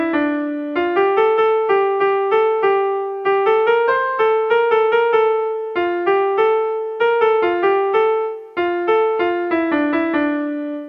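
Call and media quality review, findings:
No call or media quality faults found in this review.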